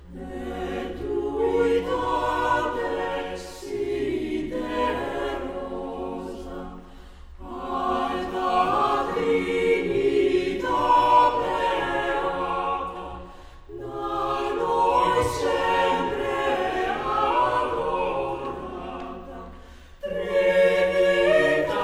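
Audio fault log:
No faults can be heard anywhere in this audio.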